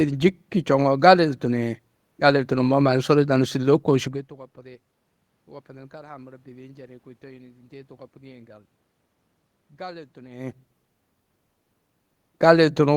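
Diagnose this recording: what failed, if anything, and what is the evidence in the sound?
Nothing in the chain has failed here; the room noise belongs to the space, and the level shifts around 4 and 10.5 seconds are just the speaker moving relative to the microphone.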